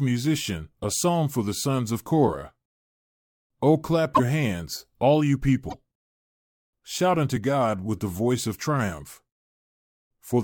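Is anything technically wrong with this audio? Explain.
Yes. A broken MP3 bit reservoir at 4.14–4.20 s and 5.68–5.74 s: the speech skips ahead with a brief glitch, likely because cut frames left later ones reading wrong data.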